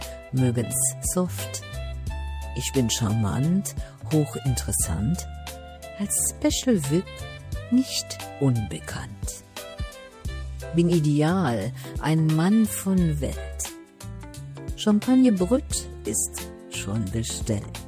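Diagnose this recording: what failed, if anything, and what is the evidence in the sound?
Nothing stood out on listening that would point to a failure at any stage of the chain.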